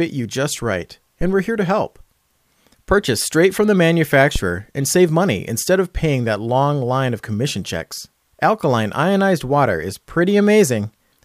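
A deep thump lands at 1.21 s and dies away by 1.35 s, with a decay of about 32 ms. A second, shorter one follows at 4.36 to 4.41 s, decaying in about 12 ms and peaking roughly 5 dB louder than the first. Both are phantom power thumps: a supply switched on or off on a live input sends a voltage step through the coupling capacitors, which turns into a low-frequency pulse that fades within a fraction of a second.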